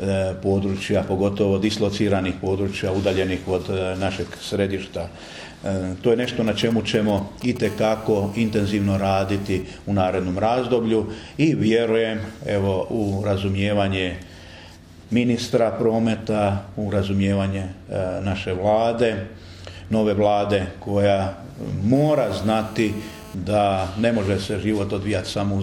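From 6.24 to 7.67 s, GSM signalling bursts break in: a nearby 2G phone sends short radio bursts that the audio circuit rectifies, producing a galloping dit-dit-dit of brief 217 Hz buzzes, somewhat below the signal. A spectrogram shows separated vertical clusters striped with 217 Hz harmonics.

GSM phone buzz follows from 7.67 to 9.62 s and returns from 21.95 to 23.35 s. The phone is now in a call, bursting steadily at 217 Hz, giving a hard, raspy buzz about 22 to 23 dB below the signal. The spectrogram shows unbroken harmonic lines, and the waveform shows a regular pulse train.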